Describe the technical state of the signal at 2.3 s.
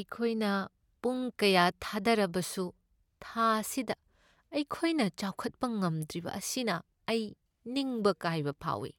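At 2.3 s the speech signal is intact, with no audible fault at that moment.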